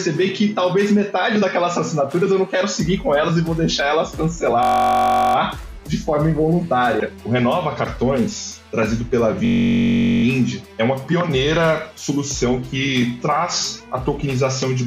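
A system hang loop occurs twice, from 4.63 to 5.36 s and from 9.45 to 10.24 s. The system froze while the hardware kept replaying one 21.33 ms slice, which fits a 1024-sample buffer. The sound becomes a steady buzz at 46.9 Hz.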